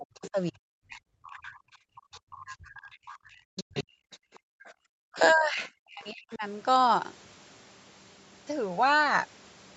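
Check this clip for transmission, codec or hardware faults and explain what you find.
The clip has echo-canceller trouble: the talker gets pushed down while a second voice is faintly present, and the room sound drops out for a moment.

Speech suppressed in double talk shows up from 0.0 to 3.91 s and again from 5.14 to 6.43 s, about 3 s of the first stretch and about a second of the second. The talker's level sinks hard, by roughly 40 dB at the worst points, so the speech dips and breaks up in pieces. The likely cause is the canceller failing to tell the near talker from loudspeaker echo while both were active, and turning everything down to be safe.

The other side's voice leaking through comes in short scraps at 0.15–0.3 s, 1.33–1.57 s and 2.13–2.19 s, then in a longer run from 2.93 to 5.34 s. It sits well under the talker, around 20 dB down, and about 25 dB down in the brief bit near 2.1 s. 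It's a faint second voice in the background. It's likely loudspeaker playback that the canceller didn't fully strip from the microphone signal.

Background gated by the echo canceller happens between 4.19 and 4.9 s, for about half a second in total. The room tone drops away by about 39 dB and then comes back. That's the canceller clamping the microphone hard while the loudspeaker was playing and releasing once it decided the echo had passed, which makes the ambience briefly vanish instead of fading naturally.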